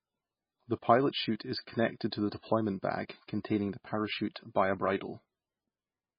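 Throughout, the speech sounds watery and swirly with nothing above 5.1 kHz, likely heavy MP3 compression at a very low bitrate near 17 kbps.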